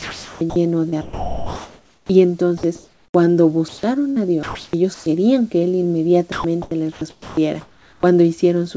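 From the start to 0.56 s, and again from 0.89 to 2.09 s and 2.57 to 3.14 s, the speech turns choppy, with quiet stretches swapped for flat synthetic hiss. This is sound chopped by the voice detector, likely a sender-side detector toggling and comfort noise filling about 0.47 s, 1.1 s and 0.45 s respectively.

At 3.68 to 3.83 s the speech gives way briefly to steady noise, about 0.15 s of comfort noise covering roughly 70 ms of lost sound. This is sound dropped by the voice detector, likely because it mistook quiet speech for background and stopped sending.

The chopping returns from 4.10 to 5.06 s and from 6.32 to 8.03 s, with about 0.48 s and 1 s of the sound replaced by comfort noise.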